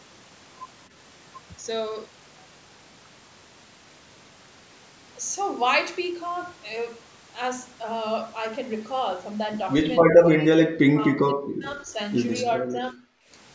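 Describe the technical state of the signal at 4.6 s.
At 4.6 s the speech is intact, with no dropout, distortion or other fault, only the normal band limit of call microphone processing, which leaves nothing above 8 kHz.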